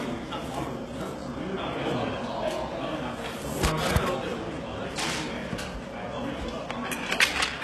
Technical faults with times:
0.00-7.63 HE-AAC compression

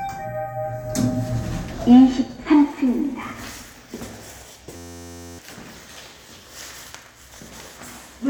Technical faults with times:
4.76-5.39 system hang loop

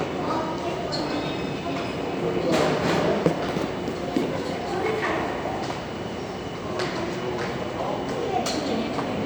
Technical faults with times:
none

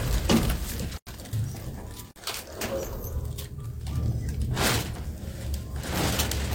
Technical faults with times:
0.98-1.07 block of digital silence
2.11-2.16 block of digital silence
5.95-5.99 damaged data in a compressed stream

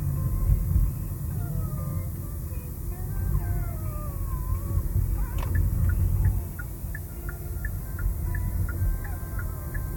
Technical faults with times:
0.00-9.96 low bit depth with noise shaping

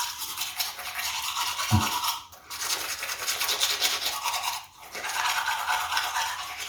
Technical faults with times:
0.00-6.69 Bluetooth LC3 compression

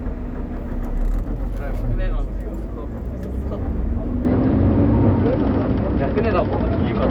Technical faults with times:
4.25-7.10 input switched to a poorer device

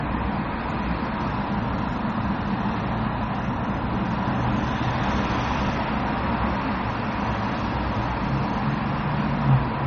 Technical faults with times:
0.00-9.87 low-bitrate audio saved at a high bitrate

